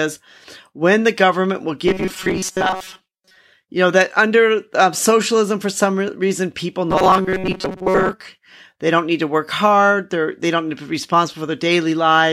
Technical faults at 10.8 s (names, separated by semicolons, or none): none